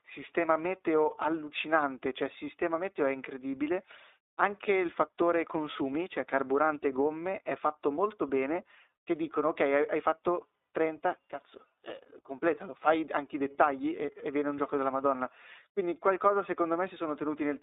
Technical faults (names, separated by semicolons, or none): iLBC codec